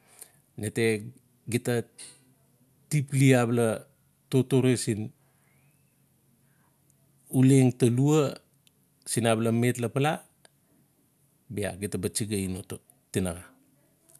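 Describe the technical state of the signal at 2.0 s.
At 2.0 s the speech signal is intact, with no audible technical fault at that point.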